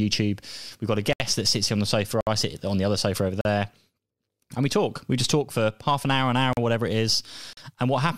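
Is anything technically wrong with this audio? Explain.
Yes. The speech has blocks of digital silence at 1.13 s, 2.21 s (after "sits on the sofa", before "I sit on the"), 3.41 s (after "the other sofa over"), 6.53 s (between "an hour an hour" and "whatever it is") and 7.53 s. Each time, most likely because the output buffer went unfilled, zeros went out instead, for 70 ms, 61 ms and then 40 ms three times. The sound drops out and returns with no fade, leaving brief holes.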